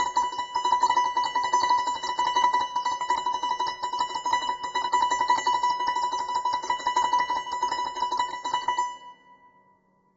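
From start to finish, the music sounds rough and grainy. Noise fills the gaps between harmonics. Nothing is heard above 7.7 kHz. The likely cause is heavy low-delay AAC compression at a bitrate near 16 kbps.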